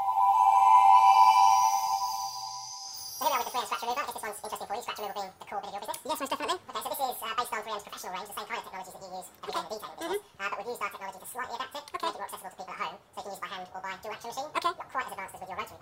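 From start to finish the audio runs at double speed and sits a full octave, 12 semitones, above where it should. This is a wrong sample rate fault: the samples are clocked out twice as fast as they were captured, consistent with 24 kHz material played at 48 kHz without conversion. Unlike a pitch shift or a time-stretch, which change only one property, this raises pitch and tempo by exactly the same factor, so everything sounds small, bright and hurried.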